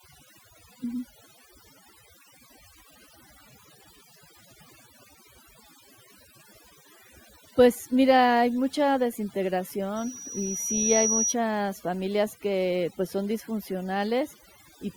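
Overdone noise removal runs through the whole recording. The noise reducer was set too aggressively, so any frequency band sitting close to its noise estimate gets pulled far down or cut entirely, and the softer components of the speech are removed along with the hiss. The result is a near-silent background dotted with small twinkling artefacts, while the voice has its quieter detail stripped away.

From 9.96 s to 11.35 s there is a loudspeaker feedback squeal. The microphone is picking up the loudspeaker it drives, and at around 5.8 kHz the loop gain climbs above unity, so that one frequency feeds on itself. It swells over roughly a second into a sharp, high-pitched whistle that ends up somewhat louder than the speech, then stops at 11.35 s.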